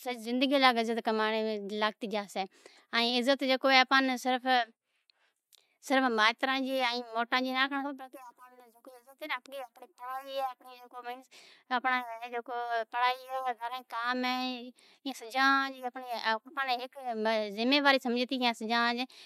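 Nothing stood out as a technical fault on listening to this speech recording.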